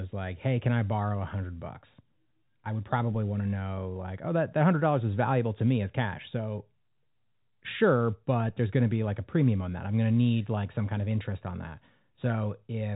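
A DC step occurs twice in this telephone-band speech, which carries nothing above 3.8 kHz. The zero line of the waveform suddenly jumps to a new offset, and the shift then bleeds away as a 5 Hz high-pass pulls it back to centre. Each jump lands as a single low thump while the talk carries on untouched: at 3.14 s, between "I would" and "want to know like", and at 8.48 s, just before "there's going to be".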